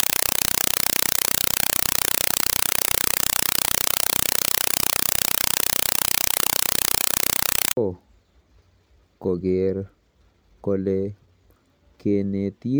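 An AC-3 compressed stream played as audio, sent out undecoded as if it were ordinary samples, replaces the speech from 0.0 to 7.77 s with very loud, chattering static: 4 ms noise bursts repeating 31.25 times a second, which fits a 192 kbps stream.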